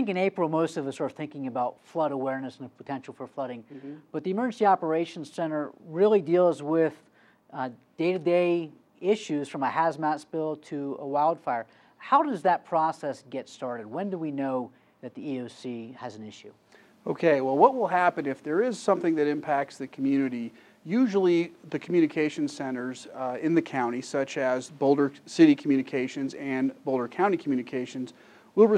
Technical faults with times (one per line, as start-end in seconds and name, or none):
none